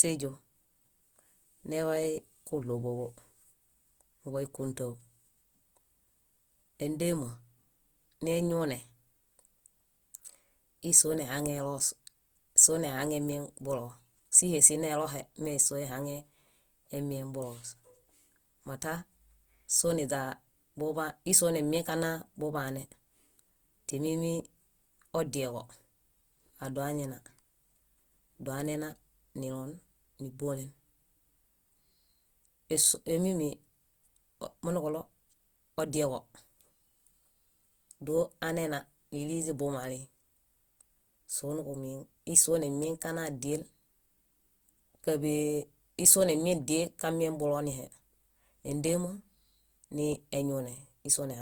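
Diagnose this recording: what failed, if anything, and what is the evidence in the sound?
The codec stage is where it went wrong. The speech most likely passed through Opus compression in its music (CELT) mode at a rate starved for bits, which fits roughly 24 kbps. Throughout the recording the speech sounds rough and grainy, with noise-like texture where the voice should be clean. The bandwidth stays full, reaching about 20.1 kHz. The encoder preserved each band's energy but refilled short-changed bands with folded or noise content instead of true detail.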